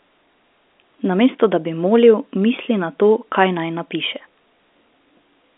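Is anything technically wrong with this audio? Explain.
No, nothing in this speech clip is technically wrong. It carries the narrow sound of G.711 telephone coding, with the line band running from about 250 Hz to 3.6 kHz and nothing heard above roughly 3.7 kHz.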